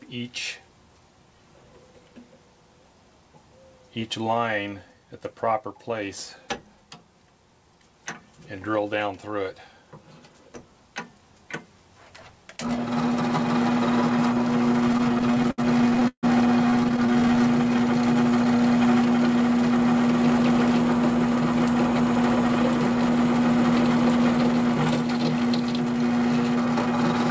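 From 14.88 to 16.25 s, then 16.71 to 17.44 s, repeated stalls (stutter) break up the sound. The jitter buffer kept running dry, so the last sound was stretched to cover each gap, about 0.6 s in all, with one hold of 151 ms. Nothing is lost, but the audio drags and stammers. Throughout, the 8 kHz ceiling fits a wideband call codec.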